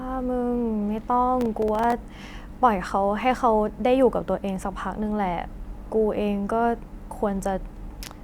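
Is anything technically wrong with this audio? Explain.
Yes. From 1.41 to 2.04 s there is processor overload crackle. Around ten very short buffers, each a few milliseconds long, miss their deadlines and drop to silence. The hard-edged gaps stack into a gritty tearing crackle over the speech until the load eases.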